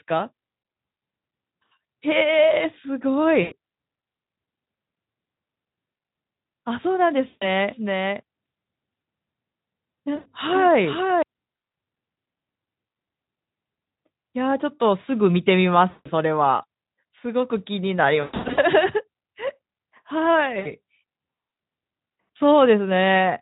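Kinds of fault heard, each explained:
VoIP packet loss concealed by the speech codec: Packets went missing, and the decoder filled each gap by repeating its last pitch and spectral shape at falling gain. Each gap becomes a short buzzy or smeared tone that fades out. There are gaps at 3.41, 7.27, 10.15, 15.89 and 20.59 s, lasting 60 to 160 ms. Around 18.21 s, 300 ms of loss is scattered over 360 ms. The sound stays weak briefly after each gap, over the light Speex coding.
Doubled audio track: From 7.71 to 11.23 s, a second full-band copy of the speech plays about half a second behind the first. It is a few dB quieter. It has no decay or room colour, so it sounds like a flat echo rather than a reflection. It starts and stops abruptly at those times. The likely cause is the same signal being captured again through a slower path and mixed in.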